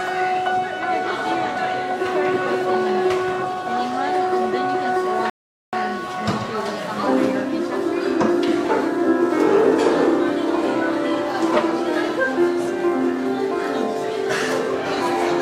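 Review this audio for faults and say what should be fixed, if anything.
At 5.30 s the sound drops to dead silence for about 0.43 s, then picks up at 5.73 s exactly where it broke off: a rebuffering stall. The player exhausted its downloaded audio and waited for more. A larger playback buffer would prevent it.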